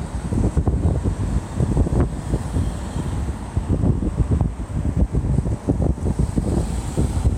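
Nothing stood out on listening to this recording of sounds.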